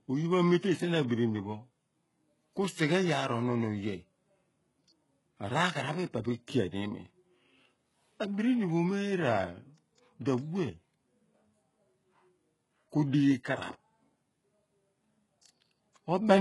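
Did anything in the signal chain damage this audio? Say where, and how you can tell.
Yes, at the codec stage, throughout the speech: nothing above 11.5 kHz, with treble that sounds pasted on, and gritty, lispy s sounds. That's likely HE-AAC compression at a very low bitrate, around 12 kbps, rebuilding the top end from copied lower bands that don't quite line up.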